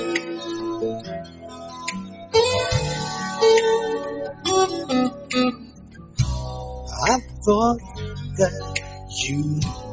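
The level pumps and thins all the way through: held sounds and their tails keep sagging while sharper onsets mostly push through, a swing of roughly 15 dB. This is a noise suppressor applied to music or sounds. A suppressor built for speech was left running, treating steady tones and decaying ambience as noise and pulling them down. The spectrum also stops at 8 kHz, consistent with ordinary call microphone processing.

In several places the sound is cut by the noise suppressor and sinks in level. This happens from 1.0 to 1.82 s and 1.99 to 2.34 s, each dropping by about 10 dB. It happens again at 5.1 to 5.3 s (about 10 dB) and 5.53 to 6.18 s (about 11 dB). Later dips are shallower: 7.8 to 7.98 s (about 7 dB), 8.83 to 9.13 s (about 6 dB), and 9.76 s to the end (about 5 dB). In each, the suppressor judged the sound to be noise and turned it down.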